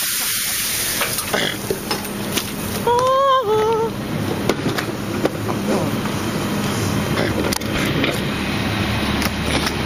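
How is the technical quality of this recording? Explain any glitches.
Two brief glitches mar the recording, both bit error spikes. At 6.64 s and again at 7.86 s, a bit flipped somewhere in memory or on a digital link, throwing the sample value up by a power of two before it dropped straight back. The first corrupts three consecutive samples and peaks near about -7 dBFS. The second is a single sample reaching about -1 dBFS. Each is heard as one sharp, broadband tick with no relation to the surrounding sound.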